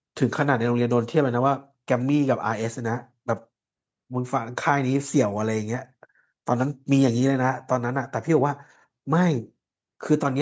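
No faults found in this speech recording; it carries the usual call microphone processing, with the lowest bass rolled off and nothing above 8 kHz, as expected for that path.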